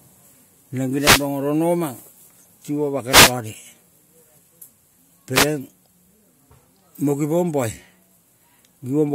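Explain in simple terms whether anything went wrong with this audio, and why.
Yes, something went wrong. The speech is interrupted three times by a wireless microphone noise hit: a short burst of static from 0.96 to 1.27 s, again from 3.08 to 3.34 s, and a briefer one from 5.34 to 5.46 s. A wireless microphone sends its sound to the receiver by radio. When reflected copies of that signal cancel each other out, the signal briefly fades. The receiver's own hiss then rises and swishes over the speech.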